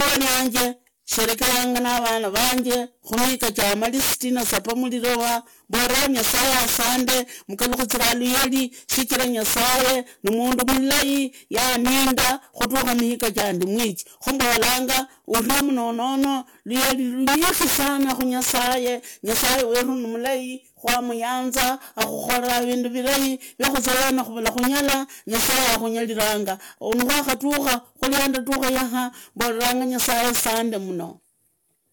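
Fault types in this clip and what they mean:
Integer overflow: the gain runs about 13 dB too hot and isn't limited, so loud speech peaks wrap to the opposite sign, breaking up roughly 4 percent of samples throughout.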